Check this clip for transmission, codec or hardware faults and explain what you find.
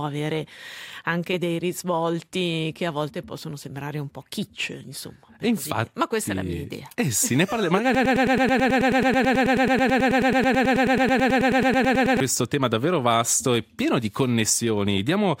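There is one fault, a broken-record loop. From 7.95 to 12.20 s, the playback chain likely stalled and kept resending the last fragment it held. A 108 ms piece of sound repeats exactly, back to back, 39 times, and the audio that belonged in that stretch is missing.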